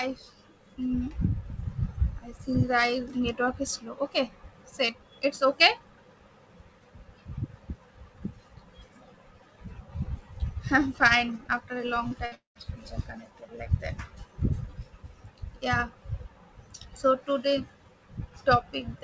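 At 12.08 s, short concealed packet loss: about 30 ms of audio reached the decoder too late, so it extended the previous sound, leaving a brief smear before the signal resumed. At 12.26 to 12.35 s, a burst of packet loss dropped about 60 ms, and the concealment holds the last sound as a fading buzz or hiss before skipping ahead. Straight after, from 12.35 to 12.58 s, a long network dropout likely cut delivery again. The filled sound fades out, about 130 ms of silence follows, and the audio returns with roughly a fifth of a second missing, all within the call's G.722 band, which stops at 8 kHz.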